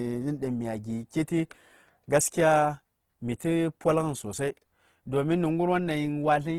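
Throughout the speech, tones sound rough and grainy, with a noisy texture in place of swirling holes. The likely cause is Opus compression in CELT mode at a rate that fits about 16 kbps. Starved bands are refilled with folded or noise content, while bandwidth still reaches 20.2 kHz.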